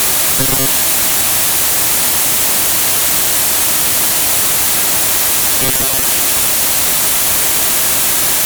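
A rigid, metallic buzz pitched at 133 Hz replaces the natural character of the audio twice, from 0.37 to 0.67 s and again from 5.60 to 6.05 s, following its rough contour while losing detail. This is robotic sound from repeated short buffers, likely caused by audio arriving too slowly: the same 7.5 ms slice is replayed to fill gaps, covering roughly half of the first stretch and most of the second.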